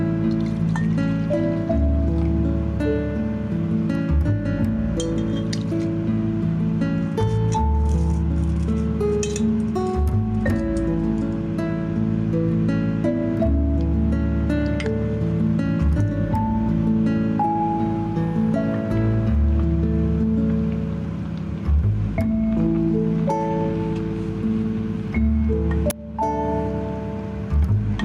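The level pumps throughout. The gain is pulled down under loud sounds, swinging by about 5 dB. This is gain pumping, likely from a fast limiter working against excessive gain. At 25.90 s an uninitialised buffer gives a sudden, loud crack. Leftover memory was played as audio, which fits a 10 ms block.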